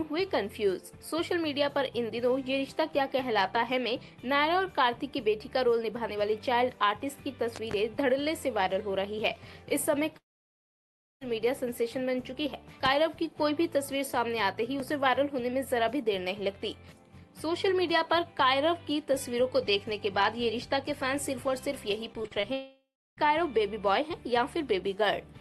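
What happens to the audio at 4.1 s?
Nothing goes wrong at 4.1 s; the audio plays through intact, carrying only the steady coding character of the call path, whose top end stops at about 12 kHz.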